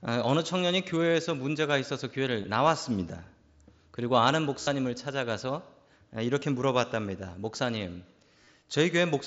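Speech recorded over a Bluetooth headset with the mSBC wideband codec suffers concealed Bluetooth headset packet loss. Voice packets dropped between headset and phone, and the receiver filled each gap by repeating the closest-matching recent waveform. The single brief loss at 1.09 s is nearly hidden, while the short runs at 2.43 s and 6.40 s give brief buzzes. The 45 ms run from 4.62 to 4.67 s becomes a steady buzzy tone, with a slight warble as the real speech resumes. Scattered losses between 8.41 and 8.47 s, the longest run about 22 ms, add short buzzes.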